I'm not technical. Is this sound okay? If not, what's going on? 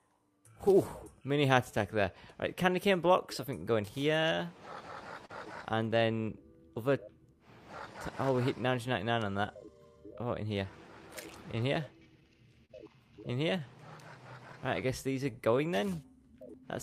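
No. Three connected problems can be heard.

There is clock drift between sender and receiver. The device that sent this audio was running its clock roughly 3 percent slower than the device playing it back. Nothing fixes the gap, so sound arrives a little too slowly for the player the whole time, and the player has to keep compensating. That causes the other two problems.

To keep pace, the receiver makes repeated timing corrections from about 0.40 s to 16.56 s. It repeats tiny slices of sound to fill the shortfall, which plays the material at about 98 percent of its proper speed and adds roughly a third of a second in total. Each repeat is small and the spacing is uneven, so you may notice faint hiccups or a slightly wobbly pace rather than one obvious glitch.

There are two short stalls from a late packet, at about 5.26 s and 12.65 s. Each time, the next piece of audio hadn't arrived yet, so the player held the last sound a bit longer: 32 ms the first time and 39 ms the second. 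Nothing is lost, and playback picks up where it left off. You may hear a brief hold with a slight buzz or dip.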